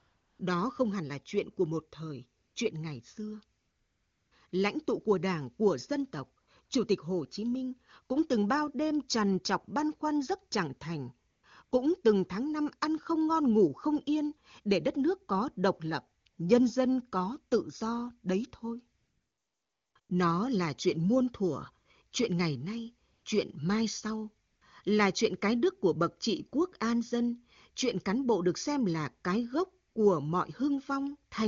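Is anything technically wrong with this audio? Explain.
Yes. AMR comfort noise appears in fifteen speech pauses between 0.0 and 29.95 s, longest at 18.99 to 19.95 s and next longest after "thời chuyện ngày xưa" at 3.59 s. Speech frames stopped and synthetic, steady noise replaced the real background for 20 to 960 ms.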